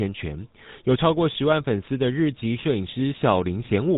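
Throughout, GSM full-rate codec damage is plainly audible as buzzy, gravelly speech from pulse-excited vocal-tract modelling; a spectrogram shows nothing above 3.8 kHz.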